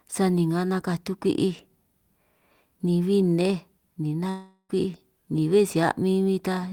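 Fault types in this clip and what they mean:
Long network dropout: From 4.29 s to 4.71 s the speech breaks off. The last sound is drawn out into a buzzy, hissing tail that fades over about 0.4 s. About 50 ms of silence follows. The speech then resumes further along, and about 400 ms of it is simply gone. This is likely a stretch where no audio reached the receiver, which filled the hole by extending what it had.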